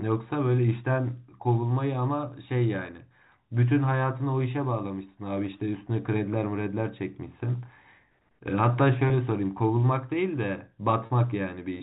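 Packet loss with pitch repetition occurs at 9.08 to 9.10 s and again at 11.06 to 11.10 s, with gaps of about 20 ms and 40 ms, which fits one lost packet and then two. The receiver fills each hole by repeating the last pitch period of the speech. The shorter gap sounds like a brief buzzy hold. The longer one stretches that held tone before the speech returns, all within a narrow telephone band consistent with G.711 coding.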